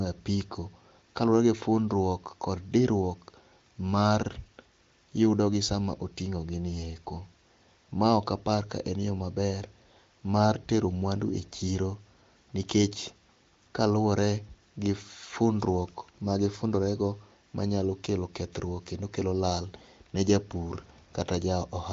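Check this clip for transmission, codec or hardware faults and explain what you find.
No faults found in this clip.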